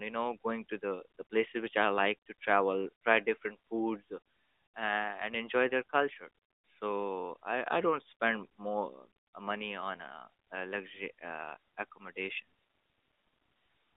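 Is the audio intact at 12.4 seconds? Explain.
Yes, the speech is intact at 12.4 seconds, with nothing breaking into the sound at that moment beyond the narrow telephone-band character of the AMR narrowband mobile codec it passes through.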